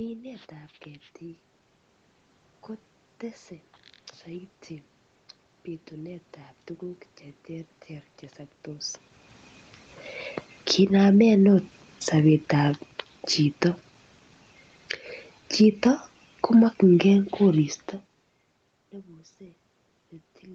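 From 4.24 to 9.03 s, automatic gain rising lifts the level by about 4 dB. The gain control judged the input too quiet and raised its gain slowly over almost five seconds, so the speech and the room noise behind it swell together. That shared rise is what separates it from the talker moving, as heard around 8.5 s, where only the voice changes and the background stays put.

From 10.52 to 13.0 s, automatic gain falling pulls the level down by about 4 dB. Inside that stretch, from 11.11 to 11.85 s, a brief automatic gain rising of about 7 dB pushes back up before the decline resumes. A second automatic gain falling, of about 5 dB, runs from 15.45 to 18.17 s. In each fall the gain control judged the input too loud or its background too strong, and lowered its gain gradually, so the sound starts loud and then sinks with its background rather than dropping at once. The 15.45 s fall overlaps the talker moving near 18 s, but the room noise sinking along with the voice marks the gain change. 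Across the clip the call path band-limits everything to 8 kHz.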